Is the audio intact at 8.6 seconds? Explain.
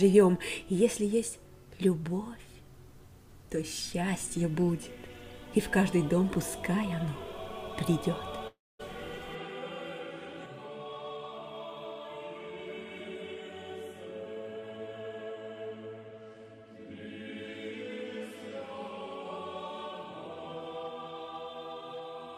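No. From 8.47 to 8.81 s the sound breaks off and the last moment is stretched into a fading buzz that sinks toward silence before the audio resumes, about 320 ms of it lost. This is likely a long network dropout concealed by the receiver.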